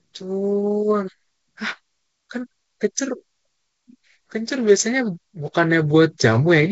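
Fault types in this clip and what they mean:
The speech has passed through G.722 wideband telephone coding, with its content stopping near 7.7 kHz and any coding trace at most faint, consistent with the full 64 kbit/s mode, and no fault is audible.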